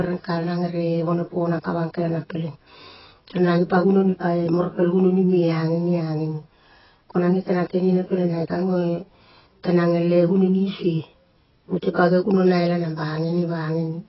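Throughout the speech, the sound is dull and smeared, with a warbling, fizzy texture on sibilants. Nothing remains above about 5.6 kHz, which points to a very low bitrate near 12 kbps. This is likely AAC compression: heavy quantisation of each frame's spectrum. A spectrogram would show a hard ceiling at 5.6 kHz with patchy holes below it.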